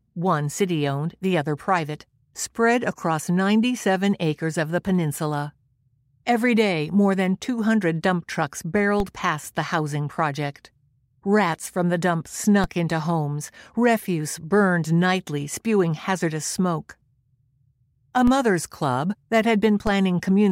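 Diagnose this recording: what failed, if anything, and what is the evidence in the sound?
A DC step fault at the converter or analogue input stage: the zero line jumps by about -15 dBFS at 9.00, 12.64, 18.27 and 19.87 s, each a low thump. The offset then drains away through a 20 Hz high-pass, showing as a sudden baseline shift with exponential recovery on the waveform and a brief low-frequency smear on the spectrogram.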